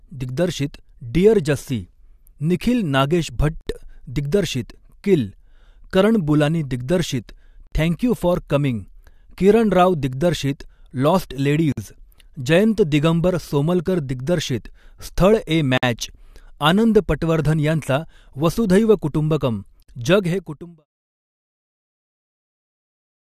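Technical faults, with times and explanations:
3.61, 7.67, 11.72, 15.78 and 19.83 s: gap at a join of encoded pieces. The speech drops into silence for about 58 ms at the first join and 53 ms at the others, recurring every 4.0 s, for example just before "थँक यू फॉर कमिंग", just after "स्थळ ए", and between "वसुधैव कुटुंबकम" and "जग हे कुटुंब आहे". Separately encoded pieces were joined untrimmed, so encoder start delay and last-frame padding remain as holes with smeared edges before the speech resumes. The smooth fade-out ending near 20.86 s is a normal edit.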